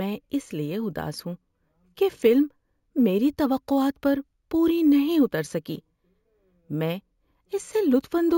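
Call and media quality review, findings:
Imaging from sample-and-hold upsampling, whole clip: metallic fizz riding on the speech, about 26 dB down, mirrored into 8 to 16 kHz and moving opposite to pitch. Points to a 16 kHz stream repeated up to 48 kHz without an interpolation filter.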